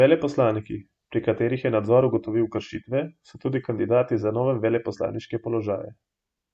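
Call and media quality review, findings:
No audible faults found in this speech recording.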